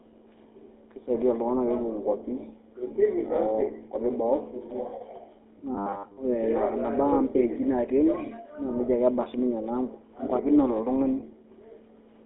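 Throughout, the GSM full-rate codec gives the speech a gravelly, buzzy roughness, with nothing above 3.8 kHz. This grit is constant.

From 5.75 to 6.17 s there is robotic sound from repeated short buffers: a rigid, metallic 100 Hz buzz, likely from a roughly 10 ms buffer being replayed over most of the stretch.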